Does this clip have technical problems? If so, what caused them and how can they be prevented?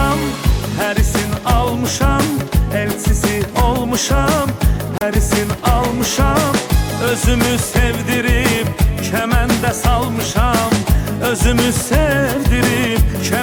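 Yes. Damaged data in a compressed stream causes a brief glitch from 4.98 to 5.02 s. The decoder lost sync on corrupt frames. Checksummed, reliable transfer prevents this.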